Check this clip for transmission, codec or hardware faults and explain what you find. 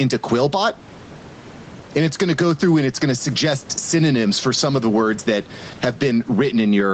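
One fault stands out in this speech clip: gain pumping, running the whole way through. The gain swings around 10 dB, likely from a fast limiter clamping down on gain set far too high.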